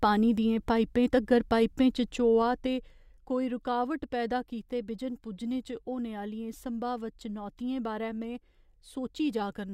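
Speech, with zipper noise from 2.05 to 3.35 s. The level drops by roughly 10 dB in 2 dB steps, about four a second. Each unsmoothed jump leaves a small click, so a ticking rides on the voice.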